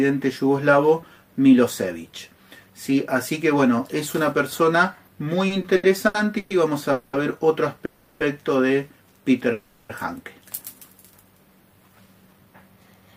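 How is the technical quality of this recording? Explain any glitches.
The recording is marred by a run of network timing faults from just before its midpoint on, first stalling the sound, then rushing it.

Repeated stalls (stutter), 5.47 to 6.53 s: the audio drags and hiccups through five short holds, the longest 120 ms, as the jitter buffer repeatedly ran dry. About 310 ms was filled in and nothing was lost.

Call audio freeze, at 6.92 to 7.16 s (210 ms), 7.85 to 8.23 s (350 ms) and 9.52 to 9.92 s (370 ms): the last sound hangs on as a fading buzz, never reaching silence, then picks up where it stopped. The likely cause is delayed packets emptying the buffer.

Jitter buffer speed-up, 11.88 to 13.13 s: the sound runs hurried at about 114% speed with unchanged pitch, as roughly a fifth of a second of pitch periods was trimmed to cut the built-up delay.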